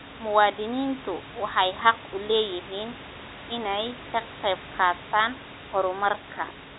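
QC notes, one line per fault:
No faults found.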